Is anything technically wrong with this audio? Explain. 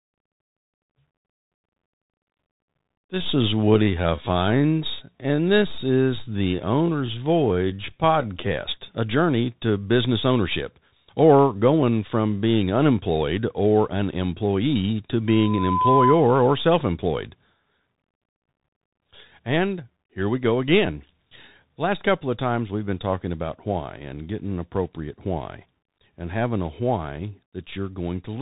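Yes. Two faults are audible.

The whole clip carries Bluetooth CVSD headset codec damage. Nothing passes above about 3.8 kHz. The codec sends one up-or-down bit per sample, so fast loud peaks outrun its adaptive step. S sounds turn scratchy, and a granular hiss sits under the speech. The sound fits a 64 kbps CVSD link.

From 15.27 to 16.28 s there is a loudspeaker feedback squeal. A microphone hears its own loudspeaker, and at 1 kHz the loop gain exceeds one. That tone swells over about half a second until it is a few dB louder than the speech, then stops.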